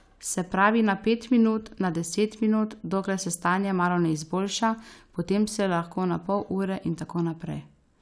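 Nothing goes wrong anywhere in this speech recording, so there's nothing to point to along the way.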